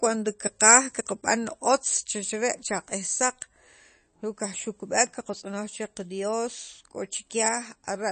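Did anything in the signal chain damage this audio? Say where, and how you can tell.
Yes, at the codec stage, and it runs through the whole speech clip. Nothing comes through above about 8.3 kHz, so the sibilance sounds dull, and there's a watery, swirly texture throughout. That's the signature of likely MP3 compression at a starved bitrate, consistent with something like 32 kbps. Short on bits, the encoder chops the treble at a fixed point and drops weaker frequency lines that flicker in and out frame to frame.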